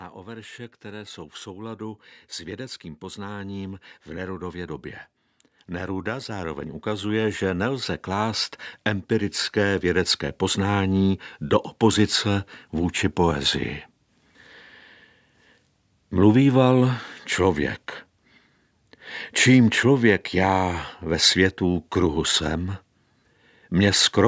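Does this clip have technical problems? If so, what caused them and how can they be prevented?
Yes. Automatic gain rising from 0.15 to 4.9 s, 5.68 to 8.57 s and 9.08 to 11.71 s: the call's gain control judged the input too quiet and raised the level by about 8, 7 and 4 dB. Voice and background swell together each time, while the call microphone processing leaves nothing above 8 kHz. To prevent it, set a steady, adequate input level or disable automatic gain control.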